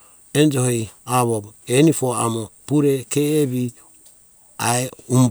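No technical faults detected.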